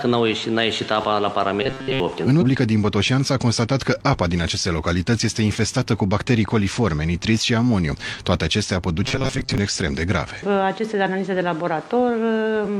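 From 1.63 to 2.00 s, new audio likely arrived too seldom, so the player kept repeating a short buffer of about 7.5 ms. That imposes a fixed 133 Hz pitch, turning most of the sound into a rigid, metallic robotic buzz.

At 2.37 to 2.43 s, one stream segment likely failed to load and was skipped, so the sound jumps abruptly ahead with a small blip.

From 9.04 to 9.58 s, the player likely starved for data again and repeated a short buffer. The sound again turns into a mechanical buzz locked at 133 Hz.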